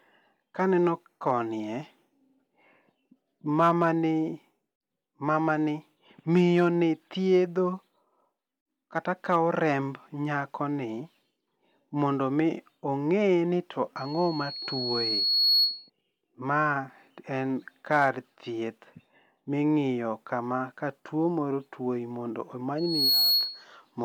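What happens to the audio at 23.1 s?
A microphone is picking up the loudspeaker it feeds, and at 4.3 kHz the loop gain rises above one, so that frequency keeps reinforcing itself. The result is loudspeaker feedback squeal from 22.78 s to 23.65 s: a single piercing tone that swells over roughly a third of a second and then sits about 5 dB louder than the speech until the squeal stops.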